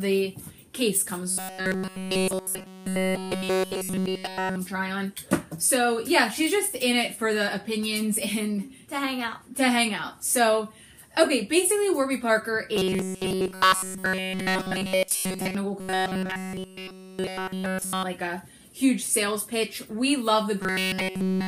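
Robotic sound from repeated short buffers affects the audio at 1.30–4.56 s, 12.76–15.55 s, 15.80–18.03 s and 20.62 s to the end. Each stretch becomes a rigid 188 Hz buzz, likely from one roughly 5.3 ms buffer being replayed repeatedly while nearly all of the underlying audio is skipped.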